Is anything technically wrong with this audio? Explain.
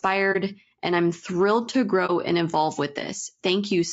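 Yes, there are two problems. Throughout, likely low-delay AAC compression (AAC-ELD) at a low bitrate near 32 kbps leaves the speech rough and grainy, with noise between harmonics and a thin, synthetic top band. At 0.32 to 0.36 s, just before "and I'm thrilled to", and at 2.06 to 2.11 s, between "and I'm thrilled to" and "and evolve with", AAC frame loss with muting occurs. The decoder zeroed a lost frame, so overlapping windows fade the sound into a brief 30 ms dip.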